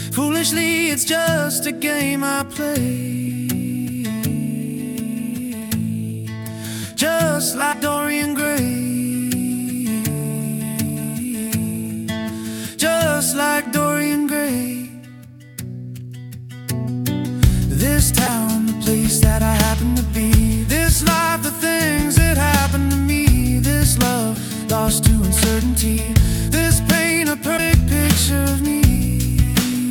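A broken MP3 bit reservoir is the likely cause of two brief glitches in the audio, at 7.72–7.75 s and 27.57–27.59 s. Each lasts about one 24 ms frame: frames were lost, so the next frame's borrowed data came from the wrong bytes and the audio jumped.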